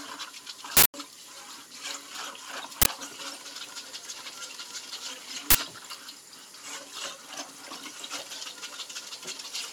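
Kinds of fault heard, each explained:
Uninitialised buffer: at 0.77 to 0.94 s, 2.82 to 2.86 s and 5.50 to 5.55 s the sound gives way to harsh, loud bursts of digital noise. Each burst is a block of playback memory that went out before any audio had been written into it, so stale data was played as samples. The first lasts about 170 ms, fitting an 8192-sample block, and the two later ones about 43 ms each, fitting 2048-sample blocks.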